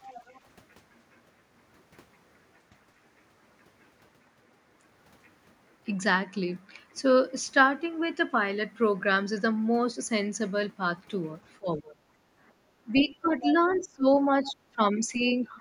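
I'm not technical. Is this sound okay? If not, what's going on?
No. At the very start, from 0.08 to 0.39 s, and again from 13.41 to 13.84 s and at 14.45 to 14.53 s, the other side's voice is leaking through, likely because the echo canceller missed some loudspeaker sound. You hear a second voice.

From 11.59 to 11.98 s and from 13.01 s to the end, speech is suppressed in double talk, likely because both sides spoke at once and the canceller turned everything down. The talker dips and breaks up.

At 12.6 to 12.73 s, the background is gated by the echo canceller. It briefly turned the microphone down, so the room sound dips for a moment.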